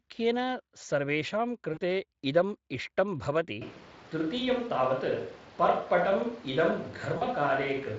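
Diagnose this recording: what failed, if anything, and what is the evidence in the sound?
Network stage, with VoIP packet loss concealed by the speech codec. At 1.73–1.80 s and again at 7.17–7.23 s, about 40 ms of audio goes missing each time, which fits two lost 20 ms frames. The Speex decoder, whose coding damage elsewhere is only light, fills each gap by repeating its last pitch and filter at falling gain. On a spectrogram the harmonics run flat and smeared through each gap and fade out. On the waveform the envelope sags. The sound stays weak briefly after packets resume because each decoded frame builds on the previous one.

Capture stage, a switch to a distant microphone. From 3.62 s to the end the sound abruptly turns roomy and hollow, with thinner bass, while the overall level barely changes. The likely cause is that the close microphone's signal dropped out and a farther pickup took over. 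On a spectrogram the low end thins, and reverberant tails smear each onset. The noise floor between phrases sits about 20 dB below the speech. On the waveform the quiet gaps no longer fall to near silence.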